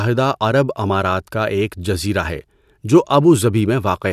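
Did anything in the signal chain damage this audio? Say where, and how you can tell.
No, nothing in the signal chain damaged this audio.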